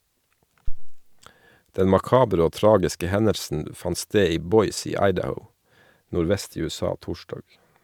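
At 0.68 s a phantom power thump hits the speech, a deep low-frequency bump peaking at about -11 dBFS. The sudden voltage step from the supply being switched on a live input passes through the coupling capacitors, and the input sees it as a single large pulse. It dies away with a decay of roughly 87 ms, and the low rumble is gone by about 1.07 s.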